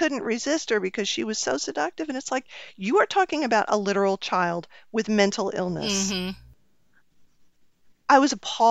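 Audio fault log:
No fault is heard anywhere in this speech clip.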